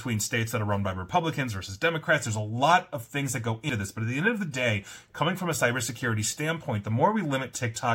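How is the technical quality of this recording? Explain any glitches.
There is one glitch in this speech. At 3.69 s, just after "of things that go", compressed frames were skipped. A frame of roughly 93 ms was missing or rejected as damaged, so the speech jumps ahead by about a tenth of a second.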